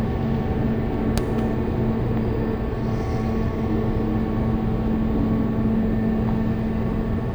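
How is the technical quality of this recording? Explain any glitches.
The technical quality is poor. Throughout, the audio plays at half speed and a full octave low, with a faint mirrored image in the upper spectrum. This is stereo read as mono: left and right samples were read in sequence as one channel.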